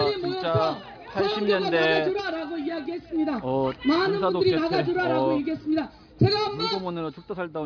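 No technical faults occur anywhere in this audio.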